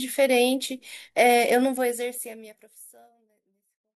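There are no technical faults to describe, in time order or otherwise, as the speech simply fades out smoothly over its last couple of seconds.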